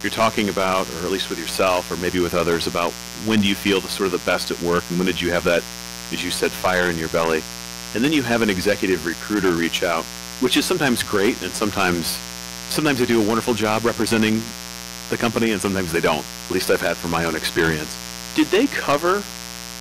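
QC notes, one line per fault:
Throughout, mains buzz. A steady, raspy buzz sits under the speech, built on 60 Hz and its harmonics reaching up into the kilohertz range. Sharp switching spikes, twice per mains cycle, get into the signal path, as from a dimmer, rectifier or an unshielded lead. The buzz is loud, roughly 15 dB below the speech. It is present in pauses as well as under talking.
Throughout, hard clipping. The speech is driven about 12 dB past what one stage can pass. Its peaks are cut flat. Those squared tops add harmonics high up the spectrum. The result is a harsh fuzz on every loud syllable, not just occasional crackle. Only a small share of the audio, a few percent of samples, is over the limit. It still lands on each stressed peak.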